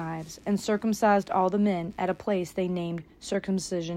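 A faint buzzing chirp, around a hundred pulses per second and about 40 dB below the sound, runs from 0 to 2.48 s: computer activity noise from the computer's load changes disturbing the audio ground.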